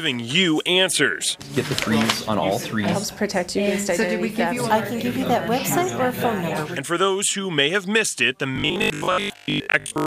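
From 8.56 to 10.06 s the audio turns into a rigid, metallic buzz at 50 Hz, robotic sound from repeated short buffers. Most of the signal is loops of about 20 ms, likely because audio arrived too slowly. On a spectrogram this shows as evenly spaced 50 Hz harmonic lines, and the waveform shows identical repeating cycles.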